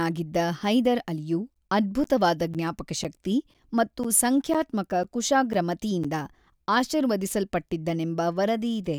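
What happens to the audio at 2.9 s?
At 2.9 s you're in the middle of a run of periodic USB or driver dropouts, which starts right after "ಹೈದರ್ ಅಲಿಯು" at about 1.54 s and lasts until about 6.05 s. Every 0.5 s something stalls the USB bus or audio driver, and around 10 ms of speech drops out to silence, about ten times in all. You hear it as a steady tick or pop riding on the speech, every half second.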